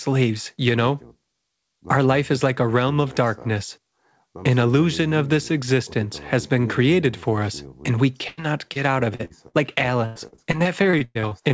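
At 8.28 to 8.39 s, a burst of packet loss removes about 100 ms of speech. The receiver extends the last sound and fades it, giving a held buzz or dying hiss before the audio jumps ahead. Two shorter bursts follow, at 9.25 to 9.32 s and 9.48 to 9.56 s, each losing roughly 40 to 60 ms with the same fading fill.

Between these, short concealed packet loss occurs at 8.73 to 8.77 s (20 ms) and 9.15 to 9.21 s (40 ms). Each hole is patched by continuing the preceding sound and blending back, heard as a brief smear or wobble where a short consonant may drop out.

From 10.06 to 11.33 s, repeated packet loss (robotic sound) sets in. Twelve gaps, the longest about 100 ms, are filled one after another, about a third of the stretch in all, so the speech turns choppy with pieces missing. Throughout, nothing above 8 kHz is present, which fits a wideband call codec.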